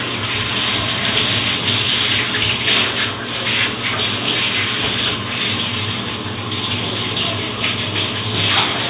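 No technical faults can be heard anywhere in this recording of sounds. There is nothing to flag at any point along the way.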